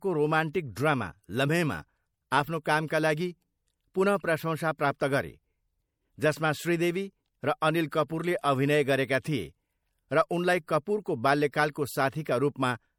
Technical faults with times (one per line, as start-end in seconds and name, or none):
0.00-12.99 MP3 compression
2.63-2.66 pre-echo
11.52 pre-echo